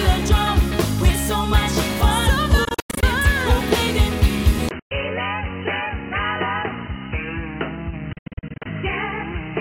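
From 2.65 to 3.03 s the sound breaks into a scatter of short holes, about 224 ms missing in all, the longest about 93 ms, resuming as if it had played on, likely a Bluetooth dropout as packets failed to reach the headphones in time. At 4.69 s a silence of about 20 ms opens, and the audio turns dull and boxy, with nothing above 3 kHz, a noticeably lower level and a faint new noise floor, likely the input switching to a poorer device. Within that changed stretch, a single gap runs from 4.79 to 4.91 s, about 112 ms, and the same dropout pattern returns from 8.13 to 8.66 s: about 317 ms lost in fragments, the longest about 75 ms.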